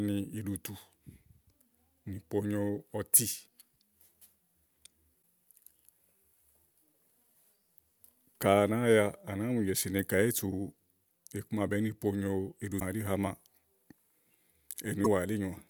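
At 5.21 s, then 12.76 to 12.82 s and 15.01 to 15.07 s, there's damaged data in the compressed stream. Corrupted bytes throw the decoder off, so it loses sync and hunts for the next good frame, leaving a brief glitch each time.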